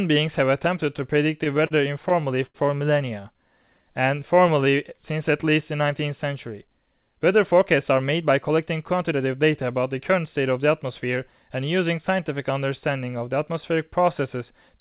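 From about 1.44 to 2.56 s you get repeated stalls, a proper stutter. Packets were turning up late or slower than playback, so the jitter buffer kept running dry, seven times in that stretch. Each time the receiver just carried the last bit of sound forward, fading it on the longer waits (the worst is 80 ms), until real audio came back. Roughly 15% of that span is stretched-out filler, so nothing's actually missing, but it drags and hiccups.

Next, from 3.21 to 5.50 s, there's a jitter buffer slow-down. The buffer was low, so the receiver padded it by repeating single pitch periods and little chunks of pause over and over. That adds 180 ms and runs the speech at about 93% speed. The pitch stays put, but sounds get drawn out.

Overlapping that, between 3.34 and 4.10 s, there are scattered short gaps, around four isolated holes from lost or late packets, each only a few milliseconds. Each one got patched by continuing the sound just before it, so what you hear is a brief tick or smear here and there rather than a dropout.

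Then from 7.54 to 9.63 s it flips to a jitter buffer speed-up. Too much audio had piled up, probably after delayed packets landed together, so the receiver snipped out short slices of a pitch period or so, many times in a row. That trims roughly a fifth of a second and pushes the speech to about 108% speed. It sounds a bit hurried at the same pitch. All of this rides on the call path's narrowband sound with nothing above 4 kHz, which fits a G.711-type codec.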